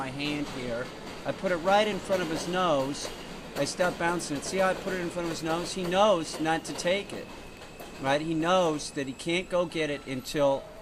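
No technical faults can be heard anywhere in this audio.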